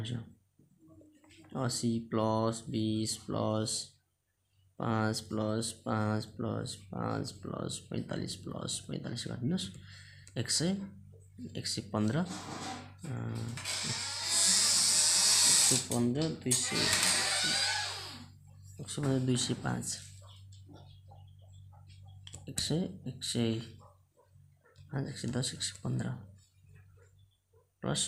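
Nothing in this audio stands out as a technical fault at any point, so there's nothing to flag here.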